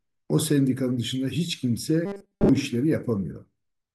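From 2.06 to 2.49 s the speech turns to a rigid 200 Hz metallic buzz, robotic sound likely from repeated 5 ms buffers replacing most of the real audio.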